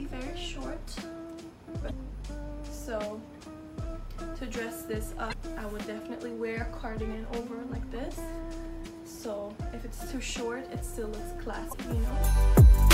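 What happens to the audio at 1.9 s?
Damaged data in the compressed stream from 1.87 to 1.91 s makes the decoder lose sync, giving a brief glitch: a vertical broadband smear and waveform discontinuity.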